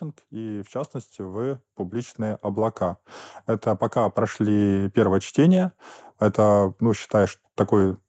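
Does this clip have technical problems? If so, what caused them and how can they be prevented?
Yes. There's automatic gain rising twice in this speech: from 0.29 to 3.09 s the level climbs about 9 dB, and from 3.92 to 5.42 s about 4 dB. The AGC heard the input as too quiet, so voice and background swell together. Setting a proper mic level, or turning AGC off, prevents it.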